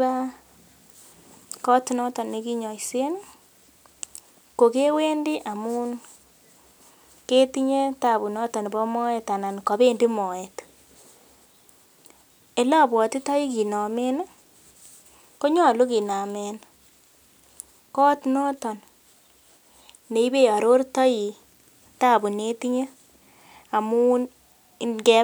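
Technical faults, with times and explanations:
No technical faults can be heard anywhere in this speech recording.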